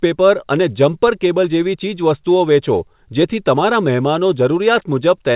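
Right from the start the whole clip carries clock drift between sender and receiver. The sending side's clock runs fast, by something like 4 percent, so audio arrives a little quicker than the receiving end plays it out. The jitter buffer keeps creeping fuller, and the receiver has to throw small bits away to keep up. You don't get one obvious glitch. Instead there's a faint sense that the timing never quite settles.

Those throw-aways are the repeated timing corrections, and they run from 0.05 s right through to 5.30 s. Every edit goes the same way, trimming short pieces so the speech comes out at about 104 percent pace. They're small and unevenly spaced, so what you notice is slight hiccups and a faintly rushed, uneven tempo rather than clear cuts. The call codec's band limit at 4 kHz, typical of G.711 A-law, dulls the top end.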